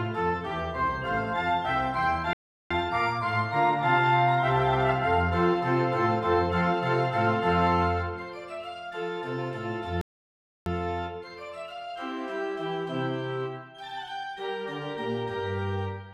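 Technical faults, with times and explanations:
2.33–2.71 s and 10.01–10.66 s, playback stall: the sound cuts out mid-flow for about 0.37 s and then 0.65 s, likely because the player ran short of data or was blocked. Each gap appears as a flat, empty stretch in the waveform and a blank vertical band across the spectrogram.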